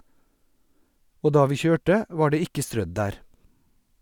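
No technical faults can be heard in the recording, and the signal stays steady and continuous from its first moment to its last.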